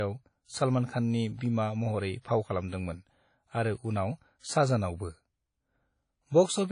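Right through the speech there's a washy, ringing smear with hiss that swells and fades along with the signal, and nothing above 10.1 kHz. That's likely WMA compression at a low bitrate, something like 32 kbps, with long transform blocks spreading quantisation noise.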